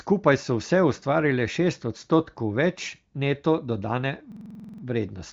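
From 4.32 s to 4.83 s the speech locks into a system hang loop: a driver or system stall left the playback hardware recycling one 46.44 ms block, which fits a 2048-sample ring buffer, eleven times over. At a 21.5 Hz repeat rate it lands as a rapid, machine-gun stutter. A waveform shows identical segments tiled end to end, and a spectrogram shows vertical stripes at that spacing, all within the AMR wideband band that stops near 7.4 kHz.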